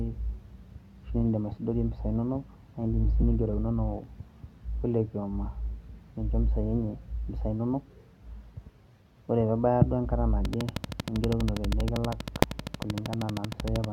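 A steady ticking, around 12.7 clicks per second and roughly 15 dB above the speech, runs from 10.45 to 13.85 s. This train of clicks likely comes from nearby equipment or a faulty connection. At 12.43 s a single sharp bang cuts through: invalid numbers at full scale, where a calculation failed and pinned a 0.73 ms block to one extreme value, far beyond the speech peaks.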